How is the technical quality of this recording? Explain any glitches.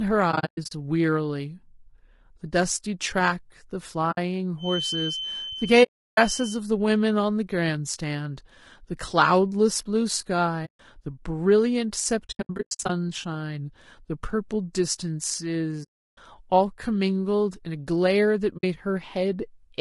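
The quality is poor. The speech is rough throughout, is broken by repeated dropouts, and carries a high whistle for about two seconds.

Low-delay AAC compression runs through the whole clip. The speech sounds grainy and rough. Noise fills the gaps between the harmonics, and the top band sounds thin and synthetic. The likely cause is a low-delay AAC-ELD coder at a low rate, around 32 kbps. At this rate there are too few bits to code the harmonics cleanly.

AAC frame loss with muting causes the dropouts. They occur at 0.31–0.72 s, 4.11–4.18 s, 5.83–6.19 s, 10.65–10.80 s, 12.25–12.90 s, 15.83–16.18 s and 18.57–18.64 s. The longest holes last 340 ms. The shortest last 60 ms. The first and fifth are scattered gaps, each run up to about 100 ms. Lost frames were decoded as silence. The overlapping windows fade the sound out and back in, so each hole has soft edges.

A feedback whistle sits behind the speech from 4.56 to 6.63 s. 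It is a thin, steady tone at 3.1 kHz, about 10 dB below the speech. Its level swells and fades slowly. The likely cause is a loop from loudspeaker to microphone held right at the edge of feedback. One frequency keeps ringing without growing. The whistle overlaps the dropout at 5.83 s.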